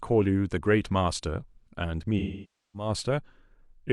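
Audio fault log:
2.19–2.89 s AAC frame loss with concealment: lost frames are rebuilt from the last good spectrum, so the speech smears, decays toward silence, then fades back in.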